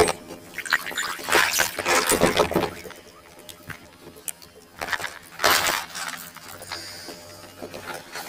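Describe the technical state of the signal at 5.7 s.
At 5.7 s the signal has planar audio read as interleaved, present throughout. Each block of about 23.2 ms, which fits a 1024-sample block, plays twice at double speed. The sound is an octave high, with a flutter at 43.1 Hz.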